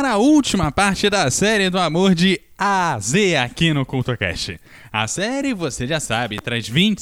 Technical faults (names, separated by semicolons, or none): loud pop